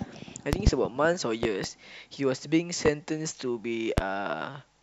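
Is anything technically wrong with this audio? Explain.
Yes. The speech is interrupted by six loud pops. There are quick double pops from 0.53 to 0.70 s and from 1.43 to 1.67 s, and single pops from 2.86 to 2.89 s and from 3.98 to 4.01 s. Each is a sharp thump standing well above the speech, the loudest about 25 dB over it, while the talking continues underneath. The likely cause is a sudden voltage pulse, as from a plug, switch, static discharge or driver glitch, which the following circuitry shapes into these clicks.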